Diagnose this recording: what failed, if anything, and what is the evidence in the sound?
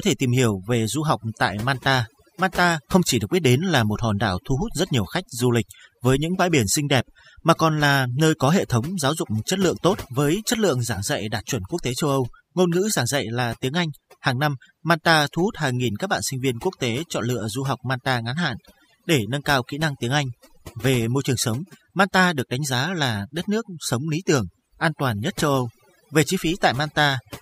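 The failure is overdone noise removal in the processing stage, and it runs for the whole clip. Between phrases the background drops to near silence dotted with twinkling specks. The suppressor is set too aggressively: any frequency band close to its noise estimate is pulled far down or gated off, and the quieter parts of the speech go with it. On a spectrogram this looks like black gaps scattered with isolated bright dots, with frayed, patchy edges on the speech.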